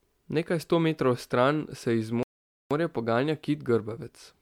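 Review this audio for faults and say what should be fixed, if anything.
The speech sounds swirly, smeared and hollow throughout. Attacks are blurred. That points to generation loss, likely from about five rounds of MP3 encoding at what sounds like 128 kbit/s. Each pass requantises on a shifted frame grid, so the damage piles up. Keep a lossless master and encode only once.

A playback stall silences the sound from 2.23 to 2.71 s, about 0.48 s. It cuts in after "metrov stran se iz" and resumes with "morja poganja kit". The player likely ran out of data or its thread blocked. Use a larger playback buffer and never block the audio thread.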